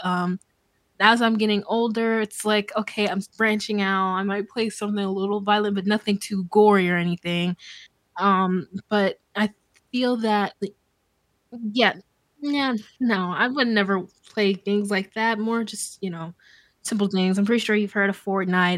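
At 4.28 to 5.33 s, between "s branching out I" and "violent but nothing too", the speech slows by about 6.2% and drops roughly a semitone, then snaps back. At 11.54 to 13.16 s, before "I would never play", and at 17.51 to 18.48 s, after "know simple things I'm", it instead runs 6.2% fast and rises about a semitone. This is a drift correction step, likely from clock-matching software abruptly changing the playback rate to rebalance its buffer. On a spectrogram the harmonic stack jumps down or up at each start and returns at the end. The waveform shows the time scale stretched or compressed over each span.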